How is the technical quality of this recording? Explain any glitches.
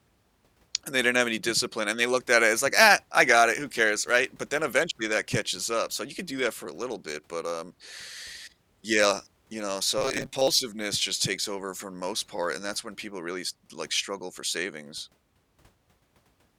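The recording has one clear glitch. From 9.98 to 10.48 s, between "you know" and "just takes over for", the speech turns into a rigid, metallic buzz near 134 Hz. This is robotic sound from repeated short buffers, likely caused by audio arriving too seldom: a chunk of about 7.5 ms is looped to fill the gaps, and roughly half the real audio in that span is lost.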